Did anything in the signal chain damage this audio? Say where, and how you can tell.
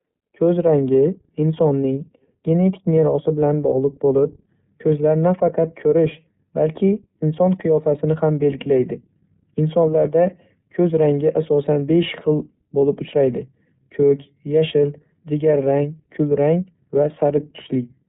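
Yes. The codec stage did it: the whole clip has passed through the iLBC codec. Nothing above 4 kHz survives, and the speech has a plainly audible rough, synthetic edge. Each 30 ms frame's excitation is coded on its own, which fits iLBC's 13.33 kbps mode.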